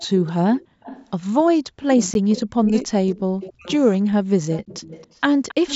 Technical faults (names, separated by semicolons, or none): echo leak; background gated by the echo canceller; speech suppressed in double talk; gap between chunks